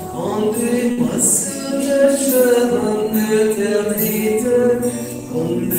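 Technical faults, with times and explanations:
0.91–0.99 s, short stall from a late packet: a packet arrived late and the jitter buffer ran dry, so the receiver held the last stretch of sound for about 62 ms and filled the gap with concealment instead of dropping anything. Playback then resumed exactly where it left off, with no content lost. The held portion sounds slightly drawn out, with a faint buzz or dip, and everything after it plays about 62 ms later than it would have.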